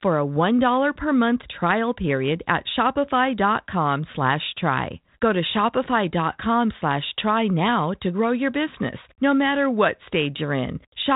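Nothing stood out on listening to this speech, which comes through a G.726 link at 32 kbit/s with the narrow telephone band that coding brings.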